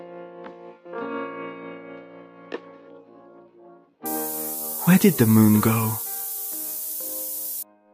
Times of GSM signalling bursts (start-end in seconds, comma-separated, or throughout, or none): none